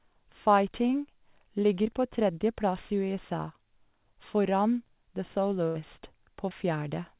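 At 1.84 s there is a short concealed packet loss. About 20 ms of the speech never arrived in time. The receiver covered the hole by carrying the last sound forward for about 11 ms, then blended back into real audio by 1.87 s. It is heard as a brief smear or wobble. The same fault returns from 6.49 to 6.53 s. There, about 20 ms went missing and roughly 17 ms was filled in. It leaves a short wobble in the speech.

From 5.67 to 5.77 s comes a burst of packet loss. About 80 ms was lost in a row, too much to hide cleanly. The receiver stretched the last sound for about 77 ms and faded it as the gap went on. It sounds like a held buzz or a dying hiss. The speech then picks up further on, and the part in between is gone. Throughout, the sound stops at 4 kHz, which points to a narrowband call codec such as G.711.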